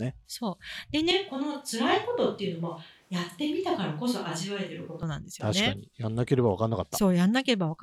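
At 1.11 s the speech abruptly turns roomy and hollow, loses low-end weight, and drops by about 5 dB, with room noise rising to roughly 35 dB below the speech. This is a switch to a distant microphone, likely because the close microphone's signal dropped out and a far-placed pickup such as a camera mic took over, capturing more reflections and less direct sound. The close, full tone returns just as suddenly at 5.03 s.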